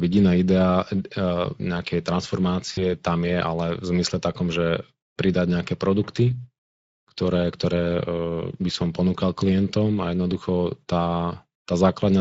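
From the start and through to the end, the speech carries a plainly audible hoarse, grainy roughness. This is the Speex codec at work. Speex is a CELP coder that models the voice as a filter driven by an excitation signal, and at this setting, which fits a bitrate of around 17 kbps, there are too few bits to describe that excitation faithfully. The missing detail comes out as noise and rasp.

At about 2.73 s the sound briefly smears into a stretched sound that fades rather than cutting off, and the gap ends around 2.82 s. This is VoIP packet loss concealed by the speech codec. About 40 ms of audio never arrived, which fits two lost 20 ms frames. The decoder filled the gap by repeating its last pitch and filter settings while lowering the gain, and because each frame builds on the previous one, the sound stays weakened just after the packets return.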